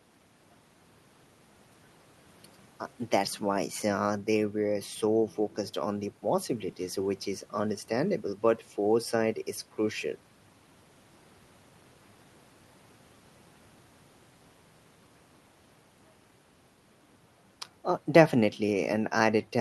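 Nothing stood out on listening to this speech recording, which carries the limited top end around 12 kHz expected of audio that has passed through a call codec.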